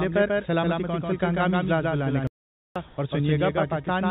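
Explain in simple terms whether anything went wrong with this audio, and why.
A few things went wrong here. First, there's a doubled audio track running through the whole clip: a second, slightly quieter copy trails the original by roughly 150 ms, giving a flat, clean echo. It's likely a second capture path or an edit leaving two out-of-step copies.

Second, at 2.27 s there's a playback stall. The sound simply cuts out mid-flow for about half a second, picking up again at 2.76 s. That's likely the player running dry of data or getting blocked.

Third, from 2.88 to 2.98 s you get comfort noise in place of the background. For that tenth of a second, the real background is replaced by a smooth, slightly quieter hiss. This likely happens when the sender pauses transmission and the receiver fills the gap with synthetic noise.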